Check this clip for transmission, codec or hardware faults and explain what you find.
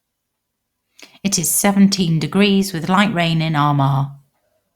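No faults found in this recording.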